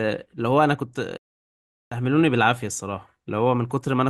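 At 1.17 s a stream reconnect cuts the speech. The connection dropped, leaving 740 ms of silence until 1.96 s. A fresh decoder then resumes about 0.7 s further on, skipping material. Waveform and spectrogram show a blank gap, then a brief fade-in.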